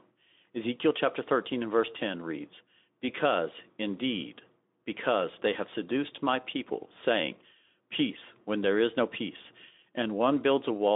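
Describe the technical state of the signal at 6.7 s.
At 6.7 s the audio is intact, with the Speex-coded speech passing through its narrow telephone-style band without any fault at that moment.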